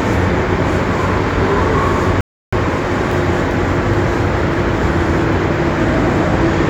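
At 2.21 s the sound drops abruptly into silence, and it picks up again at 2.53 s from the exact point where it broke off. This is a rebuffering stall. Playback ran out of downloaded audio and held still until more data arrived. The result is a gap of about 0.32 s inserted into the timeline, with nothing skipped. On a waveform it appears as a flat line with hard edges on both sides, and a spectrogram shows a blank vertical band.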